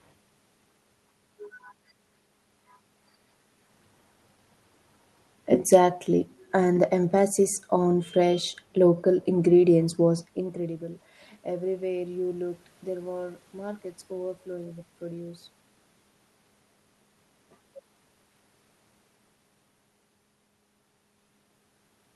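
No technical faults can be heard in this recording.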